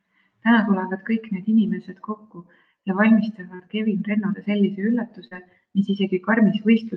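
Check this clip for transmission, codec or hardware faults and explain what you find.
Two short concealed packet losses affect this speech. They fall at 3.55 to 3.62 s, just after "need inimesed kokku ja", and at 5.27 to 5.34 s. Each time, 40 ms of audio missed the decoder. The receiver extended the preceding sound, then blended back. Each is a brief smear.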